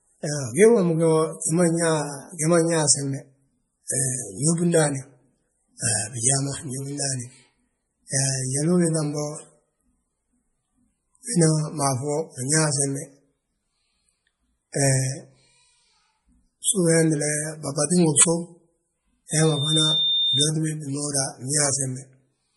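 Low-bitrate audio saved at a high bitrate runs throughout: the speech has nothing above 11.5 kHz and a swirly, smeared texture, likely from a 32 kbit/s MP3 re-encoded at 320 kbit/s.

Integer overflow hits at 12.55 s, 14.86 s and 18.19 to 18.23 s. Peaks up to about 3 dB past full scale wrap to the opposite sign, giving harsh cracks far sharper than clipping.

Loudspeaker feedback squeal runs from 19.31 to 20.50 s. A 3.6 kHz tone circulating through the mic and speaker loop swells over about half a second to roughly the level of the speech.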